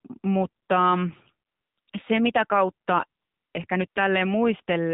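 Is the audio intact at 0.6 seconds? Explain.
No. AMR comfort noise fills 0.64 to 0.68 s: for about 40 ms the receiver substitutes smooth synthetic hiss for real sound, unlike a dropout, which would leave dead silence. Throughout, the AMR narrowband mobile codec cuts everything above 4 kHz and adds a buzzy, synthetic tone, consistent with a low rate near 7.4 kbps, more than plain low-pass dullness would.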